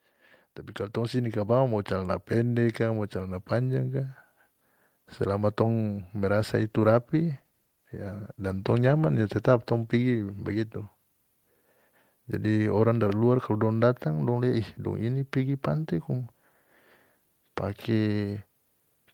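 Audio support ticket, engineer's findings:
Automatic gain rising, 0.93 to 4.23 s. Speech and background noise swell together by about 6 dB over roughly 3.3 s. Probable component: AGC on capture, reading input as too quiet and ramping gain. Waveform: envelope climbs steadily across the span, noise floor between phrases lifting with it. Spectrogram: whole band brightens uniformly, no spectral change.

Call bitrate drop, 6.59 to 10.95 s, starting just after "selama tong". Speech turns rough and watery, high end dulled, for about 4.3 s. Probable component: Opus encoder following a falling bandwidth estimate, 32 to 17 kbps. Coarser coding and a lowered upper band. Spectrogram: top of the band cut off for the duration, smeared texture, full band restored at recovery.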